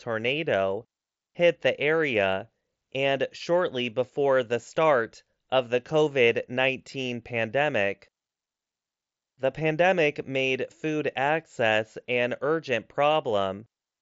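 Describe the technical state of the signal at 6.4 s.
At 6.4 s the speech is intact, carried through the Bluetooth mSBC headset codec with no fault at that moment.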